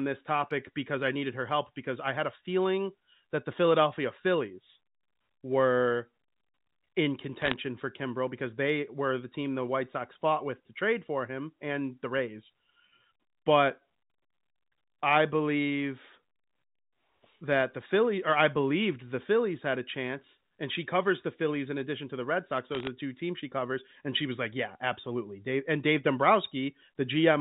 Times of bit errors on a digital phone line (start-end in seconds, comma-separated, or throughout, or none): 7.42-7.56, 22.72-22.87